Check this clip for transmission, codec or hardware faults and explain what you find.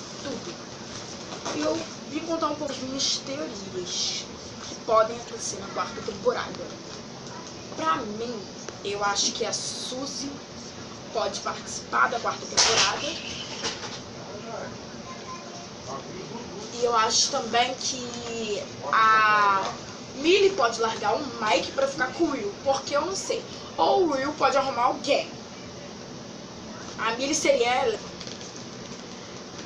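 There is one kind of fault, occurring three times.

Damaged data in a compressed stream appears at 2.65 to 2.70 s, 5.27 to 5.31 s and 27.91 to 27.96 s, each lasting about 44 ms. At these points the compressed bytes are corrupted, so the decoder misreads the affected frames, loses synchronisation and has to hunt for the next valid frame header before normal decoding resumes. Each event cuts through the sound as a brief chirp, squawk or blip.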